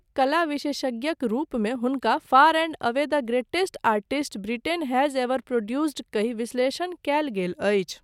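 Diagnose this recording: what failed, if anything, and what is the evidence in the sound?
Nothing appears to have gone wrong anywhere along the chain here, so there's no failure to pin on any stage and nothing in the speech worth flagging.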